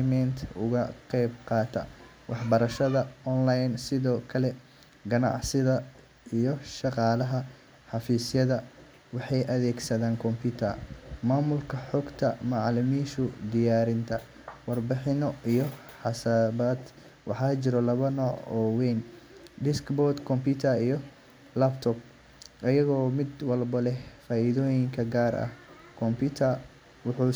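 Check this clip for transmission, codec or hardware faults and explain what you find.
I find no faults to explain in this clip.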